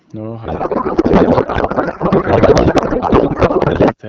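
From 0.45 s to 3.95 s the speech gives way to a codec payload misread: garbled, warbling noise that barely tracks the talker. The sound points to octet-aligned AMR-WB frames, at what fits 12.65 kbit/s, being read as bandwidth-efficient, so every field lands in the wrong place. On a spectrogram, formant and harmonic structure dissolves into smeared broadband texture, while the waveform envelope jumps unpredictably instead of following syllables, until clean decoding returns.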